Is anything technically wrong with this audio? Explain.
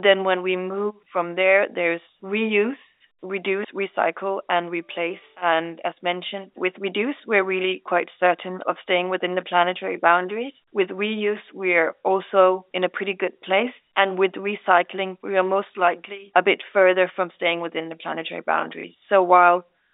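Yes. Packet loss with the last packet repeated occurs at 18.81 to 18.84 s, just after "staying within the planetary". About 30 ms of audio went missing, which points to a single lost packet. The receiver filled the gap by playing the previous packet again, and the moment sounds like a small blip. The telephone-band G.711 sound, limited to roughly 300 Hz to 3.7 kHz, is heard throughout.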